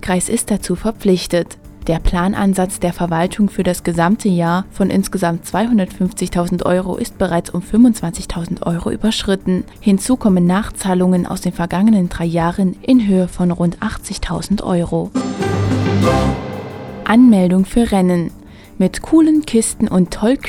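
At 12.97 s the audio abruptly loses its top end and picks up a gritty, granular noise floor, holding that state until 15.39 s before clearing. This is a Bluetooth SBC bit pool drop: with the link congested, the sending device cut the encoder's bit allocation, which fits a fall from a bit pool around 31 to about 13, near 94 kbps. Starved of bits, the highest sub-bands go empty and the remainder are coarsely quantised, producing the dull, rough texture for those 2.4 s.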